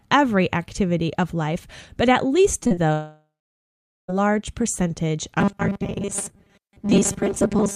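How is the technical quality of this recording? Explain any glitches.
The recording has clear network-related faults in its second and third seconds and again in its final stretch.

Short concealed packet loss: at about 2.63 to 2.72 s and 2.74 to 2.79 s, packets arrived too late, so the receiver extended the preceding sound, leaving brief smears and wobbles.

Long network dropout: from 2.93 to 4.10 s, a likely stretch of lost network traffic left the decoder continuing the last sound briefly before roughly 0.8 s of silence.

Robotic sound from repeated short buffers: from 5.40 s to the end, the likely cause is starved buffers being replayed, about every 5 ms. Most of the audio becomes a rigid metallic buzz locked at 200 Hz.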